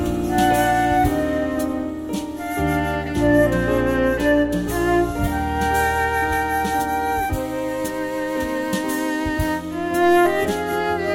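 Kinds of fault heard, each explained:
Nothing stood out as a fault on listening.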